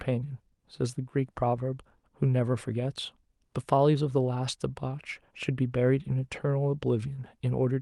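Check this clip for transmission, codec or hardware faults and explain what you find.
No faults detected.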